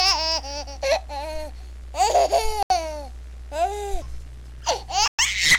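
A Bluetooth stall, likely from interference delaying packets until the headphone buffer ran dry, halts playback twice: the sound drops to silence from 2.63 to 2.70 s, about 75 ms, and again from 5.08 to 5.19 s, about 112 ms, before resuming.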